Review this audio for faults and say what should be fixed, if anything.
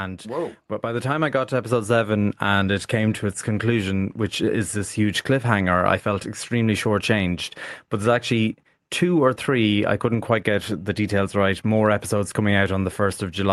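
Automatic gain rising is audible from 0.23 to 1.99 s, ending just before "and it came to". The gain control judged the input too quiet and pushed its gain up by about 6 dB. It did this slowly, over nearly two seconds. Speech and background noise swell together, so the room seems to grow louder. Above 12 kHz the call codec's band limit applies throughout. Prevent it by setting a proper input level before the call, so the gain control starts near its target.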